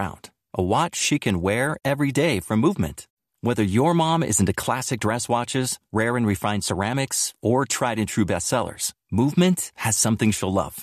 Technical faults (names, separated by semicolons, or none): none